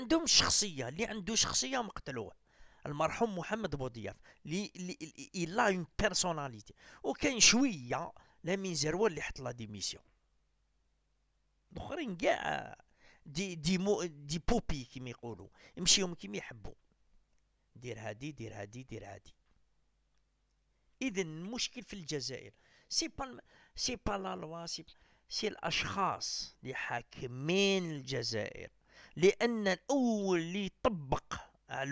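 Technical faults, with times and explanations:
No technical faults can be heard anywhere in the clip. Nothing in the audio calls for a time or an explanation.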